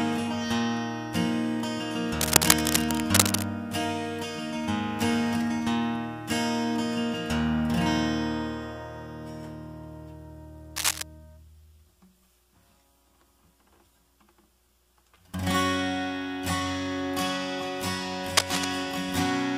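From 2.20 to 3.44 s, a burst of dense, uneven scratching sits over the sound, louder than the sound itself. A shorter burst follows from 10.76 to 11.03 s, about level with the sound. A third, from 18.37 to 18.65 s, again rises above it. Each reads as cable scratch noise. The likely cause is a worn cable, connector or control carrying DC being moved, so its contact resistance jumps about rapidly.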